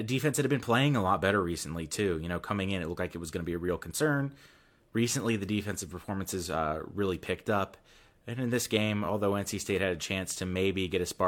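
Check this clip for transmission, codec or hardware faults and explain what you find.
Nothing turned up here: I listened for problems from the transmission path, the codec or the hardware, and this speech recording came through without any of them.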